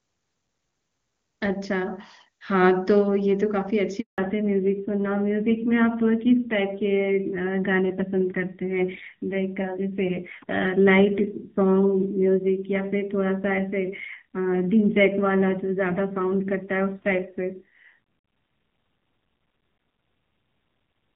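At 4.00 s the call is handed over from one network to another, and for 180 ms no speech frames reach the receiver. The handover gap sounds like the voice fading out within a few tens of milliseconds and then dead silence until the new link picks up at 4.18 s. Anything said in that interval is simply missing. Before it, the wideband HD Voice coding is clean and full, with the clarity that fits a high AMR-WB rate around 23.85 kbit/s.

From 4.18 s to the end, the call falls back to narrowband coding. The new link carries only the older codec, so the signal is band-limited and nothing above 4 kHz survives. The change is immediate: the voice loses its air and sibilant crispness and takes on a muffled, telephone-like dullness. A rough, grainy texture comes with it, consistent with a low narrowband rate of about 7.4 kbit/s.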